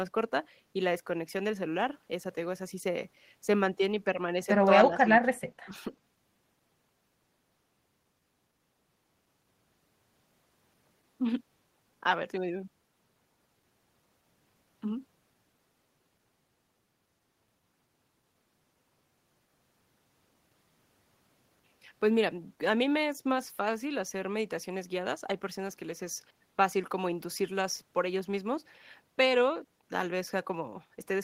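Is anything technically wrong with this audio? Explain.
Yes, there's speech suppressed in double talk, twice in quick succession. From 4.9 to 5.5 s the speech is turned down, sinking by roughly 25 dB at its deepest, and then there's a shorter, shallower dip of about 10 dB from 5.66 to 5.74 s. The likely cause is an echo canceller hearing both ends talking at once: unable to separate the near talker from loudspeaker echo, it clamps down on everything.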